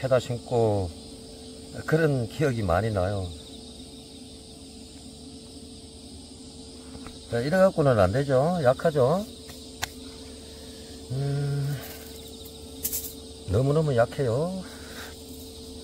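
No technical faults can be heard anywhere in the signal; the level, continuity and timing all stay steady throughout.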